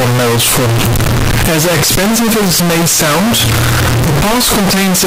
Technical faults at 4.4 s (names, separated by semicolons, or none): float read as integer